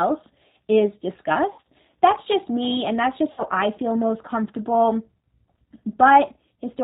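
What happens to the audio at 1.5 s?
From 1.52 to 1.59 s there is VoIP packet loss concealed by the speech codec. About 60 ms of audio is missing, which fits two lost packets. The decoder extends its last pitch and filter state with falling gain, so the speech smears into a fading buzzy tone or coloured noise and stays weak briefly afterward. Throughout, the G.729 codec, which fits an 8 kbit/s stream, band-limits the speech below 4 kHz and gives it a plainly rough, synthetic texture.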